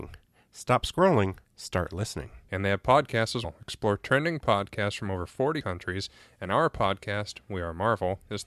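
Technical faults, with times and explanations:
3.44 s and 5.60 s, damaged data in a compressed stream: Two very short blips, the first just after "they have podcasts as". Corrupt bytes in the compressed stream make the decoder misread a frame and lose sync. It then hunts for the next valid frame header.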